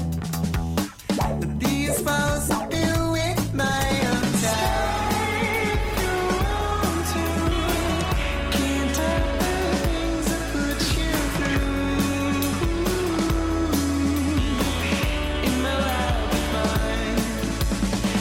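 A USB whine runs through the whole clip, a steady fixed-pitch tone at 1 kHz about 35 dB below the signal, from the bus's 1 ms frame current leaking through power or ground. A spectrogram shows an unbroken horizontal line at 1 kHz.

From 2.2 to 8.2 s the audio switches abruptly to an adaptive stream at a lower bitrate after the connection slowed. Codec artefacts rise, with no gap, which fits a drop from about 64 to 16 kbit/s Opus.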